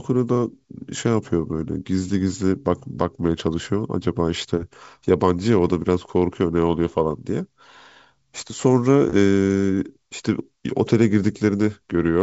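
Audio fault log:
Nothing to log here: the speech comes through G.722 wideband telephone coding at 64 kbit/s, with its content stopping at about 7.7 kHz, just as that codec's band limit would have it.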